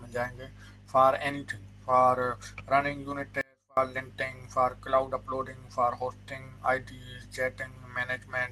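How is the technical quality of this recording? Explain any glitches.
One clear glitch stands out. From 3.41 to 3.77 s there is an audio dropout to a faint residue: the sound abruptly vanishes for about 0.36 s, leaving only a faint trace roughly 35 dB below normal, likely from a momentary signal break while the downstream path stayed live. The waveform collapses to a thin sliver, and the spectrogram shows a sharp-edged, nearly empty vertical band.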